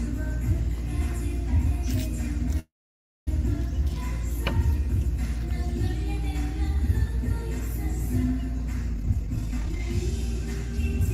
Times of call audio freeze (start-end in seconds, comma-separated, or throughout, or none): 2.59-3.29